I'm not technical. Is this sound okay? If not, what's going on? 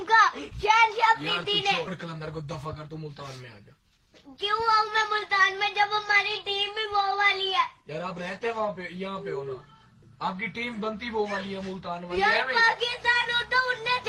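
No. There are two related problems close together near the start.

At about 1.87 s there is a skip ahead: roughly a second of sound never reaches the listener. When audio travels over a network, small pieces sometimes arrive late and pile up in a waiting area called a jitter buffer. Here a whole chunk was thrown away, so playback jumps straight from one moment to a later one with no gap and no filler in between.

Right after that, from about 2.05 s to 3.09 s, you can hear a jitter buffer speed-up. Too much sound was still waiting in line, so the receiver caught up by quietly cutting out many tiny slivers, together a little under a tenth of a second. The sound keeps its normal pitch but plays about 6% faster for that second, so it comes across as slightly rushed.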